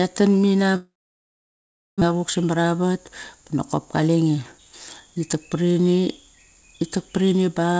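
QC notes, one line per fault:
0.76–2.12 s, long network dropout: audio stopped arriving for about a second, most likely because the network stalled. The receiver filled the gap by stretching the last sound into a decaying buzz that soon sank to near-silence, so the speech hangs, then goes quiet for roughly a second. When it resumes, the missing stretch is simply gone, and the playback delay has shifted by around a fifth of a second.
2.58–3.10 s and 4.01–5.36 s, jitter buffer speed-up: the jitter buffer had built up more audio than its target, so the receiver trimmed short pitch-period chunks again and again to catch up, removing roughly 50 ms in the first stretch and 150 ms in the second. The speech plays about 9% and 11% faster without any pitch change and sounds rushed, with the second stretch ending just before "par ini".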